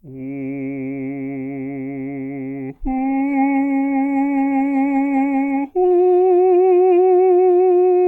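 From 2.9 s to 7.93 s there's a call bitrate drop, sounding like about 128 down to 19 kbps. The music goes muffled and watery as the highs disappear.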